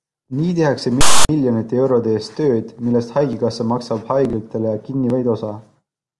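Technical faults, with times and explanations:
1.01–1.29 s, file tags played as audio: text metadata read as samples gives an offset, rasping burst, then zero-padding silence. Hard-edged broadband block, flat waveform after.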